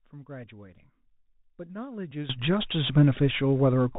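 A speech clip carries Bluetooth CVSD headset codec damage throughout. Nothing passes above 4 kHz, s sounds turn scratchy, and a granular hiss sits underneath, which fits 64 kbps CVSD. At 2.30 s there is a sudden gain jump of about 18 dB that lasts to the end. Speech and background rise together, likely from a gain change applied without a ramp.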